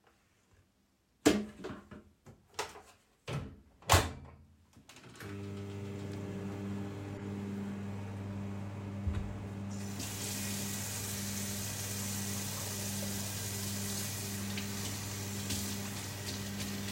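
A recording of sounds with two corrupt frame decoded bursts, faint at 1.57–1.61 s and louder at 7.17–7.24 s, where damaged frames misplace energy into a chirp, squeak, blip or burst of noise.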